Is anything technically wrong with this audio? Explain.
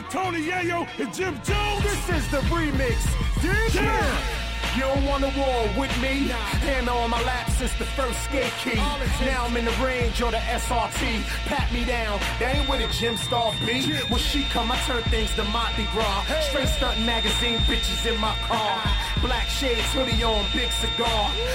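Yes. From 12.43 s to 21.54 s, a feedback whistle holds a thin 3.6 kHz tone that swells and fades slowly just below the sound, likely from a loudspeaker-microphone loop near its limit. A spectrogram shows it as a steady horizontal line.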